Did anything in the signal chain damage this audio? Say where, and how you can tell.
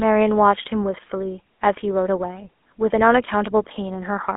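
Yes, at the codec: GSM full-rate damage throughout, with a buzzy, gravelly roughness from coarse pulse excitation, not mere telephone band-limiting to 250 Hz to 3.5 kHz, which fits a 13 kbps coder.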